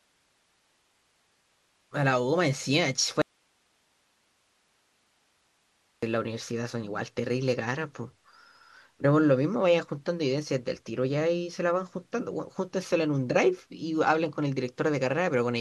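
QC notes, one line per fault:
3.22 to 6.03 s, audio dropout to a faint residue: the speech cuts off abruptly for about 2.8 s and returns just as suddenly. The gap holds only low-level hiss, roughly 45 dB below the speech level. There is no natural decay or pause shape. This likely comes from the source signal being interrupted upstream while the rest of the chain stayed live, so the noise floor of the open path is what is heard through the gap.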